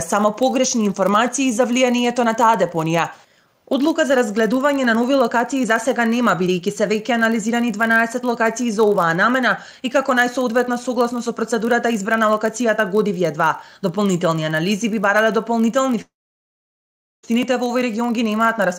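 From start to finish a buzz at 46.9 Hz runs under the sound. It comes from a block size mismatch (padded). One stage hands over blocks slightly shorter than the 1024 samples the next stage reads, so a tiny run of zeros lands in every block. That rate fits a 1024-sample read at 48 kHz. The shortfall is so small that playback runs at 0.999 times normal speed, with pitch effectively unchanged. Unlike mains hum, the buzz is a gating pattern locked to the block rate, not a smooth 50 or 60 Hz tone.

At 16.01 s the audio breaks off until 17.25 s, most likely because of a long network dropout. The last sound is briefly stretched into a fading tail, and then about 1.1 s of silence follows. When the sound returns it has moved on, because about 1.2 s of material is simply missing. That separates it from a pause or a mute, where the audio would pick up where it stopped, and from a plain edit cut, which has no decaying concealment tail.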